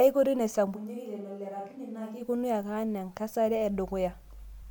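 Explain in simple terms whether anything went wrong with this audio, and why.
Switch to a distant microphone, from 0.77 to 2.20 s: the speech suddenly turns roomy, thinner and quieter, likely because a faraway microphone briefly replaced the close one.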